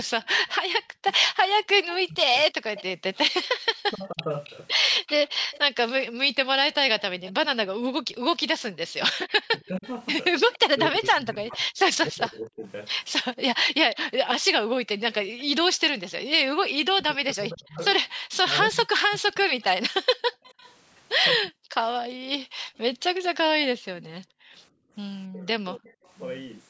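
Right from 0.0 to 9.93 s there's an echo leak: a faint copy of the speech trailing about 271 ms behind, roughly 20 dB down, most likely because the far end's echo canceller let its loudspeaker pickup through. From 0.22 s all the way to 25.94 s there's speech suppressed in double talk, with the voice dipping by up to roughly 40 dB in patches that add up to around five seconds, likely the canceller ducking everything when both sides talked at once. The echo leak comes back at 13.34 to 16.1 s with the same 271 ms lag, and again at 19.6 to 20.74 s at about 284 ms, both quieter now, roughly 30 dB under the speech. Between 20.03 and 24.94 s the background is gated by the echo canceller, with the room sound dropping out by about 40 dB for roughly a second and a half in total while the loudspeaker plays, then coming back. Last, a tiny echo leak blip at 26.05 to 26.11 s, again around 284 ms late and barely there, roughly 40 dB down. 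The call's high-pass filtering is also audible in the thinned low end, but that's normal.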